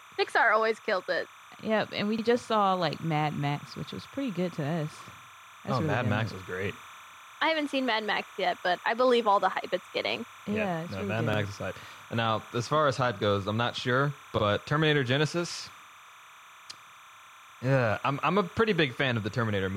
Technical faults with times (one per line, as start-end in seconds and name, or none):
0.00-19.76 timecode bleed
0.00-19.76 gain pumping
2.18-2.23 overlapping chunks
5.23-5.28 overlapping chunks
8.28-8.33 overlapping chunks
11.33-11.38 overlapping chunks
14.38-14.43 overlapping chunks
17.43-17.48 overlapping chunks